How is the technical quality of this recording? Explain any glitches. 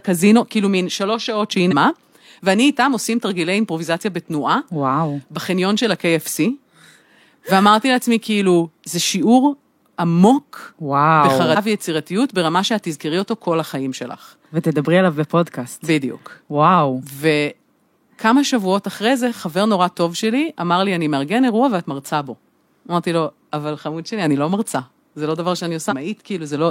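The speech jumps forward three times, at 1.68 to 1.73 s, 11.52 to 11.57 s and 25.87 to 25.93 s. These are compressed frames skipped: whole 46.4 ms frames were missing or rejected by the decoder, losing roughly 200, 150 and 300 ms of audio.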